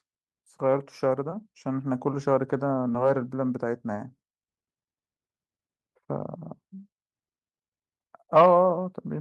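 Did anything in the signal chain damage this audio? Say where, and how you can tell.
No, no damage is audible.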